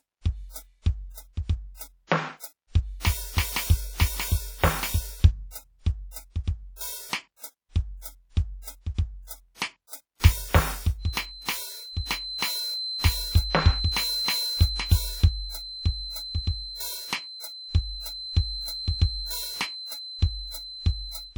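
Throughout the music, plainly audible WMA compression artefacts, ringing, washy textures and hiss breathing with the signal, likely come from a WMA 1 encode at a low bitrate around 48 kbps. From 10.97 s to the end at 21.37 s, a feedback whistle at 4.1 kHz, roughly 10 dB below the music, rings behind it, likely from a speaker-to-microphone loop near the edge of feedback.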